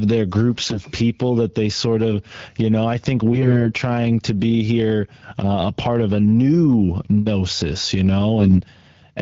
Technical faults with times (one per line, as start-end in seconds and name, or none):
0.58-0.85 AMR bit errors
3.32-3.66 AMR bit errors
8.39-8.55 AMR bit errors